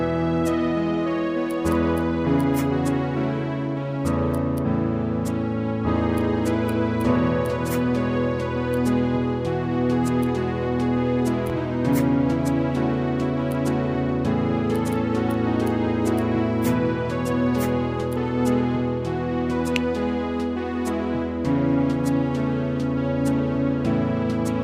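A single sharp pop lands at 11.50 to 11.53 s, peaking a few decibels above the surrounding sound, which carries on beneath it; it is likely a loud pop from an electrical voltage spike.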